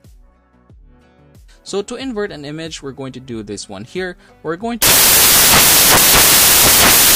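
From 4.82 s to the end, the sound collapses into loud, harsh broadband noise. These are samples built from the wrong bytes: the bytes were misaligned or swapped, so rapidly fluctuating low-order bits now dominate every value.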